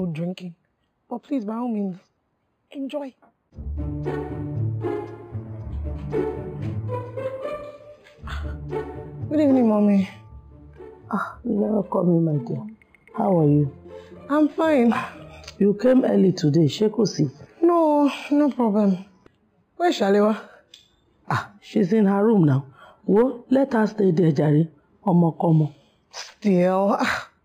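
Throughout, imaging from linear upsampling, apparently from an 11 kHz original, leaves faint mirror copies near 5.5 to 11 kHz, roughly 35 dB down: dulled highs with a metallic shimmer.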